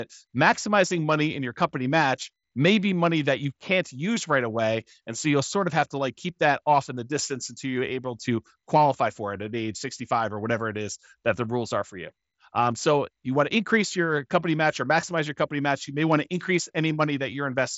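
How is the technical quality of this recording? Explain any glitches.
The recording has no glitches: the speech comes over a Bluetooth mSBC headset link, so the band stops at about 7.7 kHz and louder moments carry the light grain typical of that codec at roughly 61 kbps.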